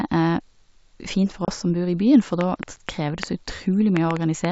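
Packet loss on an ADPCM call breaks this speech recording between 1.45 and 1.50 s, right after "fint for". About 30 ms of audio drops out as a hard-edged silent gap, which fits roughly three lost packets. When the sound resumes at "oss som bor", the decoder's adaptive predictor and step size no longer match the sender's, so the speech comes back slightly distorted before it settles. A train of clicks then runs from 2.41 to 4.46 s, beginning just after "byen for". Around seven similar pulses arrive at an uneven pace, averaging about 3.4 per second, and peak roughly 20 dB above the speech. They tick over the talking and through the pauses alike, and the likely cause is interference from nearby equipment or a faulty connection or power supply. Both faults sit on top of G.722 wideband telephone coding at 64 kbit/s, which keeps the speech clear up to about 7 kHz.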